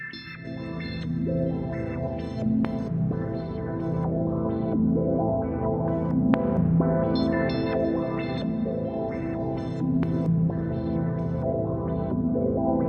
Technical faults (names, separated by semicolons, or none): none